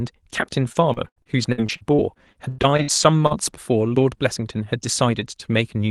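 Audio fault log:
0.35–3.32 s, repeated packet loss (robotic sound): fifteen dropouts in quick succession, the longest about 93 ms. Each one gets patched by stretching the last bit of sound, so roughly a fifth of that stretch comes out choppy, with pieces missing.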